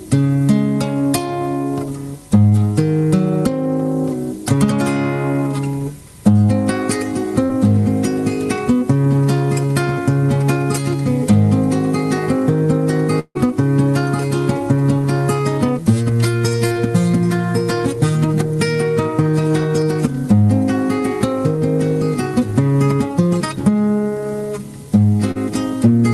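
At 2.49 to 2.53 s there is a brief smear where the sound seems to stretch for an instant. This is short concealed packet loss: about 20 ms of the stream arrived too late, and the receiver extended the preceding sound to cover the hole before blending back.

From 7.43 to 7.51 s the sound briefly hangs as a held, fading continuation, and then resumes slightly further on. This is a burst of packet loss: about 60 ms of consecutive audio went missing, so the decoder stretched the last sound and attenuated it until real packets returned.

At 13.19 to 13.37 s the sound smears out into a fading continuation lasting about 156 ms, dips into roughly 50 ms of near-silence, and then resumes with about 160 ms of material gone. The likely cause is a long network dropout, where nothing arrived for a stretch and concealment ran out.

At 16.67 to 16.74 s another smear occurs, again short concealed packet loss. 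Here about 40 ms was missing and was patched over. The resumption also lands slightly late, adding a little extra time, so the audio afterwards is nudged later.

At 25.31 to 25.37 s a final brief smear marks the same kind of short concealed packet loss, with about 40 ms missing and bridged by continuing the previous sound.

All of this travels through a WebRTC call path using Opus. Its top end stops around 12 kHz, consistent with a setting near 32 kbps.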